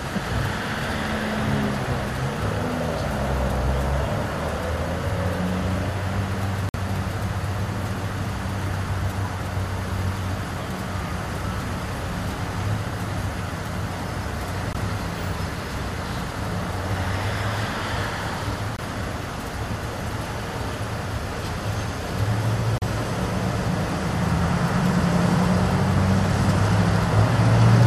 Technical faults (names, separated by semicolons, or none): gap between stream segments